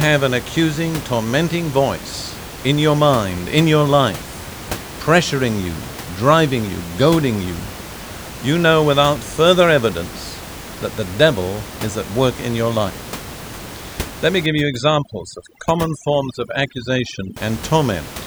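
From 14.46 to 17.37 s the background breaks into twinkling, warbling specks. This is overdone noise removal, where an over-strong reducer mutes frequency bands near its noise estimate.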